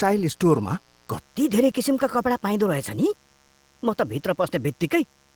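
Mains buzz runs throughout at 60 Hz. Sharp switching spikes on the supply leak into the signal path twice per cycle, spreading harmonics up into the kilohertz range. The result is a steady, raspy buzz, faint beneath the speech at some 35 dB down.

Opus voice compression is also present for the whole clip, and its damage is plainly audible. In hybrid operation, a linear-prediction coder handles the speech band and a transform layer covers everything above 8 kHz, with content reaching 20.2 kHz. The speech comes out hoarse and slightly robotic, which fits a rate near 16 kbps.

A section at the wrong speed starts at 1.20 s and lasts to the end. Playback runs 1.15 times too fast, so pitch rises about two semitones along with the tempo, and the speech turns high and hurried. The likely cause is an editor or player working to the wrong clock.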